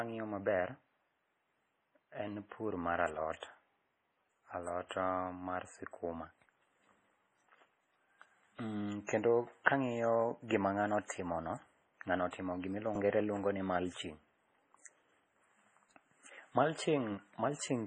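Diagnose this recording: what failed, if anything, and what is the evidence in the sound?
The codec stage failed, most likely through MP3 compression. Nothing in the speech reaches above 9.7 kHz, a hard treble shelf rather than the gradual roll-off of a poor microphone or analogue filter. The remaining band sounds heavily damaged, watery and swirly, with sibilants turning metallic as weak frequency lines drop in and out between frames. That behaviour points to a very low bitrate, around 24 kbps, starving the encoder so it discards whatever its hearing model ranks least important.

Pre-echo shows up three times: a short hiss runs ahead of sharp attacks at 9.06 to 9.09 s (28 ms), 9.64 to 9.66 s (20 ms) and 11.06 to 11.10 s (36 ms). The same codec spreads quantisation noise across a whole transform block, so noise meant for the loud onset leaks into the silence just before it, and the attack itself sounds smeared. 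Unlike an acoustic echo or reverb, the smear comes before the sound and never after it.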